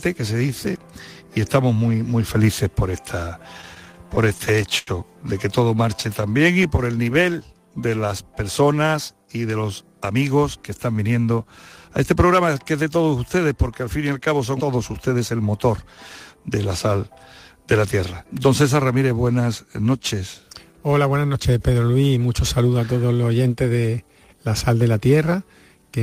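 From 3.61 to 4.89 s, repeated stalls (stutter): late packets drained the jitter buffer eleven times, the longest for 86 ms. The held-over sound makes the audio drag and stutter.

Between 5.77 and 7.13 s come scattered short gaps. About seven packets went missing, each patched by continuing the last sound, around 50 ms in all with none longer than about 10 ms, leaving brief ticks and hiccups.

Overlapping this, from 5.82 to 8.35 s, a jitter buffer slow-down repeats pitch periods to rebuild its reserve. Playback drops to 93% speed at the same pitch, adding 197 ms of drawn-out sound.

From 10.14 to 12.49 s, a jitter buffer speed-up trims short pitch-period pieces to shed excess delay. It runs at 110% speed and removes roughly 300 ms, so the audio sounds hurried.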